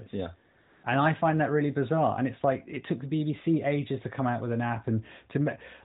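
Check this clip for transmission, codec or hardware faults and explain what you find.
There's one fault: a stretch of AMR comfort noise from about 0.62 to 0.84 s, lasting 220 ms. The handset decided nothing was being said there and stopped sending speech frames, so the receiving end filled the gap with synthetic noise built from a rough sketch of the background's level and spectrum. You hear the real ambience drop out and a smooth, even hiss slide in, then switch back when speech frames resume. All of it sits inside the band-limited AMR-NB narrowband codec sound, with nothing above 4 kHz and only light coding damage.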